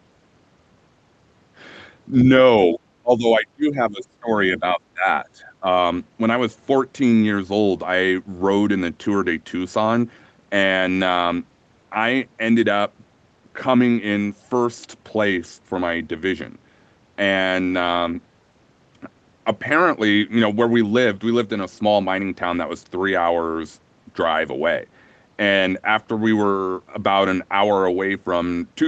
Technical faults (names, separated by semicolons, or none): speech suppressed in double talk